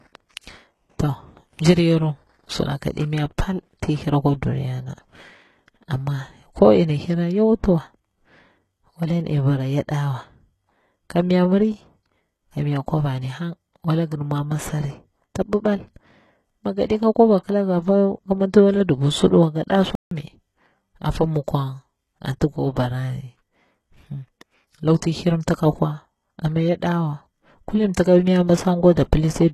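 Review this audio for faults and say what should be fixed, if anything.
Throughout the speech, the upper range has the synthetic, metallic sheen of HE-AAC compression. The codec likely codes only the lower spectrum and rebuilds the treble by copying lower bands upward under a coarse envelope, so sibilants turn gritty or lispy and their harmonics don't align across the crossover. The damage is plainly audible and fits a bitrate around 16 kbps. Unlike a plain low-pass, the treble here is present but false. Encoding at a higher bitrate, or with plain AAC, would avoid it.

From 19.95 to 20.11 s the audio drops to silence for about 160 ms and then resumes. This is a playback stall, likely the player running short of data or its output thread being blocked. The sound simply halts for the gap. That separates it from a codec glitch, which leaves smeared or garbled sound rather than clean silence. 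A larger playback buffer, or keeping the audio thread from being starved, would prevent it.

At 28.93 to 28.97 s a sharp attack is preceded by a short hiss spread over about 37 ms, and the onset itself sounds softened. This is pre-echo: the transform codec spread quantisation noise sized for the loud attack across its whole block, including the quiet moment before it. Because the noise comes before the transient rather than after it, it can't be reverb or a decaying echo. An encoder with proper block switching for transients, or a higher bitrate, would prevent it.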